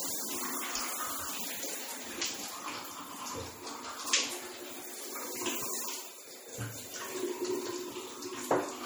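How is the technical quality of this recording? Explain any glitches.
The technical quality is poor, with plainly audible compression damage that runs from start to finish.

MP3 compression: Throughout, the sound has a watery, swirling quality, with a metallic sheen on sharp, bright sounds, and attacks lose their edge. This is likely heavy MP3 encoding, and the amount of damage fits a low bitrate of about 48 kbps. With so few bits, the encoder discards quieter frequency components, which then flicker in and out between frames.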